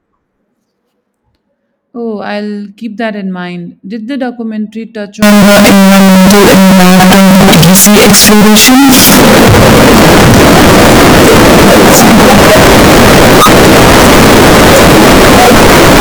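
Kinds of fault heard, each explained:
Float read as integer: from 5.22 s to the end of the clip, the speech becomes extremely loud and harsh, its waveform flattened into a near-square shape at an almost fixed, high level. Background noise rises to the same level as the speech, though the pitch can still be followed. The likely cause is 32-bit float samples being read as 32-bit integers, so each sample's sign and exponent bits, not its real amplitude, set the output level.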